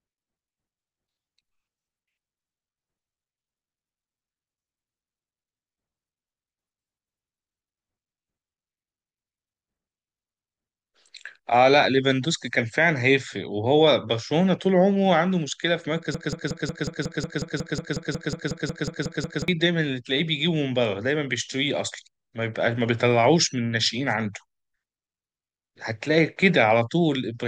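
From 16.15 to 19.48 s the speech falls into a broken-record loop: one 182 ms fragment repeats back to back 18 times, likely from a stalled stream, replacing the audio that should have played.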